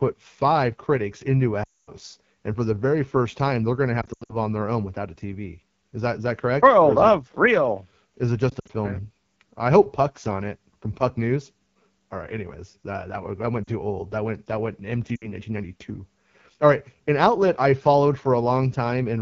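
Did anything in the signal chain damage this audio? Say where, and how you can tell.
Yes. At the codec stage, AMR wideband (HD Voice) coding at a low rate, which fits 8.85 kbit/s, leaves the speech rough and raspy throughout.

On the radio link, lost AMR speech frames at 1.64–1.91, 4.01–4.36, 8.50–8.71, 13.63–13.70 and 15.16–15.27 s made the decoder reuse stale settings with falling gain. The sound drops to near silence, longest at 1.64 s, then returns weak.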